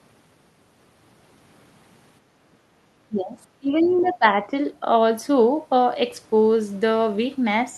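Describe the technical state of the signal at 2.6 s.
At 2.6 s the background is gated by the echo canceller, from 2.59 to 2.76 s. While the loudspeaker was playing, the canceller pulled the microphone down to keep echo out, so the room sound sinks by about 8 dB for roughly a sixth of a second before it returns. Unlike a dropout, the signal never falls to silence, and unlike an ordinary noise gate, the dip follows the loudspeaker's playback rather than the level of the sound at the microphone.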